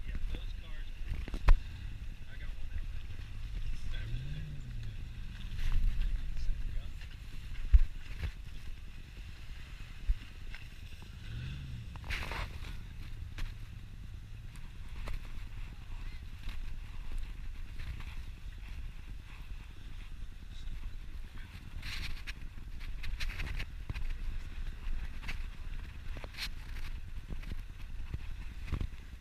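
Compressed frames are skipped at 12.62 s: the audio jumps ahead by roughly 70 ms, which fits about two 32 ms frames that were missing or rejected by the decoder.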